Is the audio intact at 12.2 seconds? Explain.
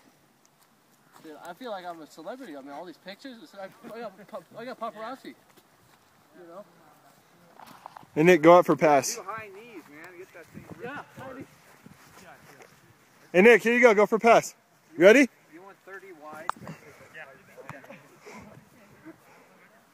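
Yes, at 12.2 seconds the audio plays through cleanly, with no dropout, click, distortion or other fault audible at that moment.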